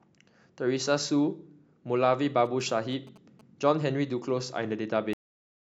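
From 2.45 to 3.41 s, GSM signalling bursts intrude: a nearby 2G phone's short radio bursts are rectified by the audio circuitry, producing a galloping pattern of short buzzes at 217 Hz, sitting roughly 25 dB below the speech.

At 5.13 s the clip has a cut-off end. The final buffers were never written or played, so the speech stops mid-sound and drops straight to digital silence with no natural decay. That silence lasts until the file ends.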